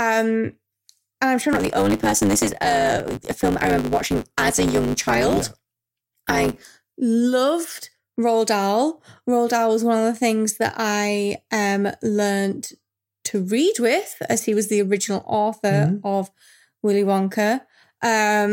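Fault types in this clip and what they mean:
Block size mismatch (truncated), 1.52 to 6.7 s, just after "and I'm sure": one stage hands over longer blocks than the next stage takes in, so the tail of every block is discarded. The regular splices put a buzz at 100 Hz over the speech, and because a fixed share of each block is lost, the talking runs about 1.16 times fast with its timbre unchanged, which fits a writer using 512-sample blocks.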